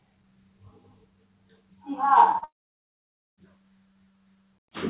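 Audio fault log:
2.32–2.36 s and 2.38–2.44 s, short concealed packet loss: two brief gaps, about 20 ms and then 40 ms, where audio did not reach the decoder in time. The receiver patched each hole by extending the preceding sound, pitched if it was tonal and as shaped noise if not, then crossfaded back into the real signal. The result is a quick smear or wobble in the everyday sound.
2.44–3.39 s, long network dropout: the audio stops arriving for close to a full second. At first the preceding sound is stretched into a fading buzz or hiss, but that extension collapses quickly and roughly 0.88 s of near-silence follows. This is the pattern of a likely network outage, where the receiver runs out of material to synthesise and holds quiet until packets resume. Playback then restarts further along, and nothing from the gap is recovered.
3.91–4.70 s, sound cut by the noise suppressor: across roughly 0.7 s the suppressor treats part of the everyday sound as background noise and attenuates it, by about 3 dB at the deepest point. 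Sustained and decaying portions are hit hardest, so tails sink and end early, while sharper onsets pass largely intact. The band-limited character heard throughout, with nothing above 4 kHz, comes from the call codec, which fits G.711 mu-law at 64 kbps.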